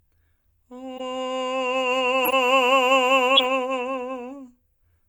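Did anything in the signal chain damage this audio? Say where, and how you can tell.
Yes, the codec stage did. The music has three corrupt frame decoded blips, at 0.97–1.01 s, 2.25–2.33 s and 3.36–3.46 s. Each is a short chirpy burst, louder each time, with the last one near full scale. Flipped bits in a few compressed frames led the decoder to misplace energy across frequencies.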